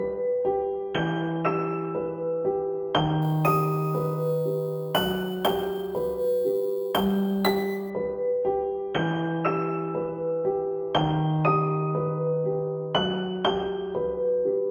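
From 3.22 to 7.90 s, imaging from sample-and-hold upsampling adds a metallic fizz at about 22 dB below the sound. Each sample was repeated to raise 16 kHz to 44.1 kHz without smoothing, so mirrored copies fill 8 to 16 kHz. Unlike steady hiss, the fizz tracks the sound's level and moves against its pitch.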